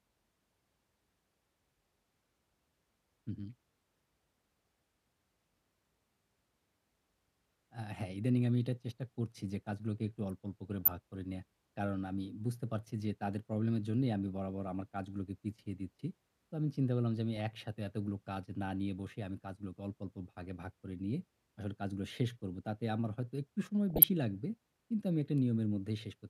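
At 10.81 to 10.88 s, at 17.37 s and at 23.90 to 24.03 s, the speech breaks into DAB burbling. Weak reception lets bit errors slip past error correction into the MP2 audio data. Corrupted samples then put short blips of noise into single sub-bands.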